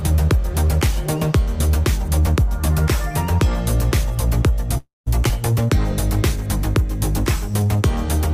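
At 4.77 s the audio stalls in a call audio freeze lasting about 0.31 s, until 5.08 s. The most likely cause is packets held up in transit while the jitter buffer ran dry. The receiver stretches the last sound into a fading buzz or hiss, then about 0.17 s of silence. No audio is lost. Playback resumes where it stopped, just later. On a spectrogram the last frame's harmonics smear horizontally and fade into a blank column, and the waveform tapers to a flat line.

Shortly after, at 5.28 s, a skip ahead drops roughly 70 ms of audio and joins the two sides almost directly, with only about 7 ms of fill. It sounds like a clipped fragment or a tiny hiccup in the flow. The spectrogram shows an abrupt vertical seam where the spectral content changes without a transition. The waveform shows a sudden shift in shape and amplitude with almost no gap between the segments.

From 7.36 to 7.77 s a jitter buffer slow-down sets in. 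The receiver repeats single pitch periods to rebuild its reserve, adding 44 ms so the passage plays at about 91% speed. The pitch stays the same, but sounds are drawn out and may warble slightly. On a spectrogram, harmonics keep their spacing but features stretch in time, and the waveform shows near-identical cycles repeated in runs.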